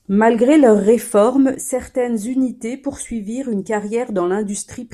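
At 1.55 s, right after "leur réforme", the speech drops abruptly by about 6 dB and stays at that lower level to the end of the clip. This is consistent with one channel dropping out: the most likely cause is that one side of a stereo pair was lost, so the mono sum keeps only half of the shared signal. Any content present only in the missing channel vanishes along with it.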